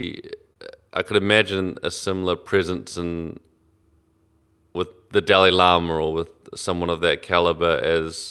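Speech carried over a WebRTC call path, with Opus coding noise and nothing above 12 kHz, shows clock drift between sender and receiver: the sender's clock runs about 2% slow, so the receiver's buffer keeps running short. Unlike a single network glitch, this causes trouble through the whole clip. It shows first as two short stalls from a late packet, at 0.01–0.05 s and 0.53–0.58 s. Each time the last sound is held, for about 16 ms and then 29 ms, and nothing is lost. That separates them from dropouts, which leave gaps. From 1.22 s to 8.02 s come repeated timing corrections. The receiver keeps repeating small pieces to pad out the slow stream, playing at about 98% speed and adding roughly 150 ms in all. These are small, heard if at all as faint hiccups and a slightly dragging, uneven tempo, not as one clean pitch shift.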